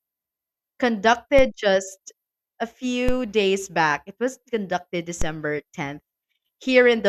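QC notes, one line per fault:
1.39 s, 3.09 s, 5.22 s: DC step, just before "just a", between "just a" and "days back", and after "was conducted". The zero line jumps by about -11 to -12 dBFS and then drains away through a 5 Hz high-pass, giving a low thump. Unlike a click or dropout, the speech itself carries on intact.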